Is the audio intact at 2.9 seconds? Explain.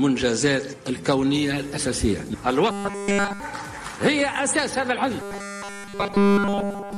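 No. At 2.9 seconds the sound is caught in robotic sound from repeated short buffers, which runs from 2.70 to 3.40 s. It turns into a rigid, metallic buzz pitched at 200 Hz. The likely cause is audio arriving too seldom, so playback keeps repeating one short chunk. A 200 Hz buzz fits a chunk about 5 ms long. All of this stretch is repetition, and the real audio in between is skipped.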